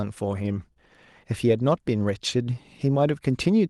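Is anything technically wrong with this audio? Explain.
Yes, there is one: a short concealed packet loss from 0.73 to 0.78 s. About 20 ms of the call arrived too late for the decoder, so the receiver made up roughly 24 ms by extending the preceding sound, either from its pitch or as shaped noise, and then crossfaded back into the real signal. The result is a brief smear or wobble. An unconcealed dropout would instead leave a hard gap or click. The audio went through an Opus call path, with a top end near 12 kHz that fits a 32 kbps setting.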